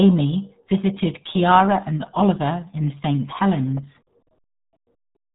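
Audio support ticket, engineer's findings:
RealAudio 14.4 codec across the whole clip: low-bitrate speech coding, consistent with about 8 kbit/s, discards everything above 3.8 kHz. Speech sounds heavily muffled and gargly.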